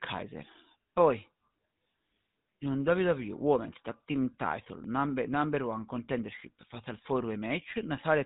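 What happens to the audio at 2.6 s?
The speech at 2.6 s, like the whole clip, carries GSM full-rate codec damage that is plainly audible. The codec models the vocal tract and excites it with a regular pulse train built from only every third excitation sample, so the voice takes on a buzzy, gravelly roughness. Nothing above 3.8 kHz survives, which dulls consonants. The coarseness fits the 13 kbps full-rate mode.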